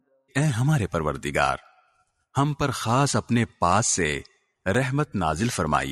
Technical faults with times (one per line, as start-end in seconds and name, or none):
0.07-0.33 sound cut by the noise suppressor
0.99 dropped samples
2.21 dropped samples
4.75 dropped samples